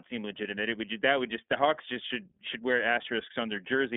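Throughout, the speech passes through the iLBC codec, each 30 ms frame coded on its own at a rate fitting the 13.33 kbps mode. Nothing above 3.8 kHz survives, leaving a 200 Hz to 3.6 kHz telephone band and a plainly rough, synthetic texture.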